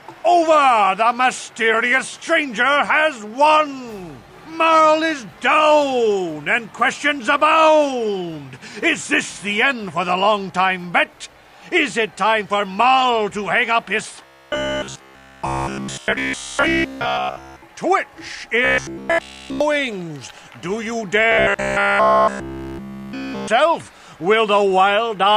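From 14.25 to 17.62 s, 18.65 to 19.61 s and 21.32 to 23.49 s, the sound turns into a rigid metallic buzz at 66.7 Hz. This is robotic sound from repeated short buffers, likely from a roughly 15 ms block looping entirely. A spectrogram shows evenly spaced harmonic lines, and the waveform shows identical repeating cycles.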